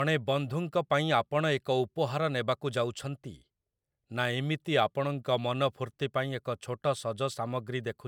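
A speech recording, and nothing is technically wrong with it.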